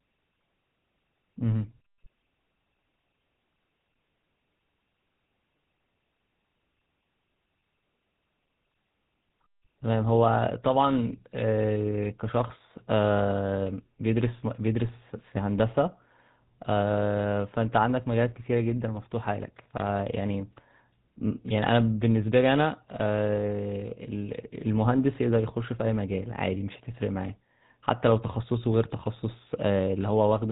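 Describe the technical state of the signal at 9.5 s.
At 9.5 s the speech carries GSM full-rate codec damage, present across the whole clip: a rough, buzzy grain from pulse-driven excitation, consistent with 13 kbps coding, and a spectrogram empty above 4 kHz.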